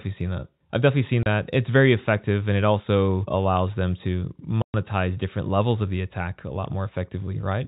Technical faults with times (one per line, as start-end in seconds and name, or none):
1.23-1.26 packet loss filled with silence
3.66-7.68 sample clock jitter
4.62-4.74 packet loss filled with silence